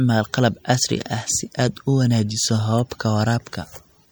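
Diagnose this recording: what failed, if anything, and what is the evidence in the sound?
The codec stage is the likely culprit: heavy MP3 compression, at a rate that fits about 64 kbps, starved the encoder of bits throughout, so it dropped weak frequency lines. The speech sounds watery and swirly, with smeared consonant onsets.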